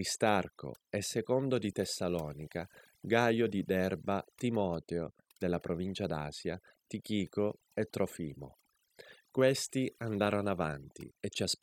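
A speech recording that suffers from overdone noise removal from start to finish. A noise reducer set far too aggressively has pulled individual frequency bands down or out whenever they sat close to its noise estimate, taking the softer parts of the voice along with the noise. Gaps fall to near silence dotted with twinkling specks. A noise gate would instead switch the whole signal off between phrases, and the specks never appear.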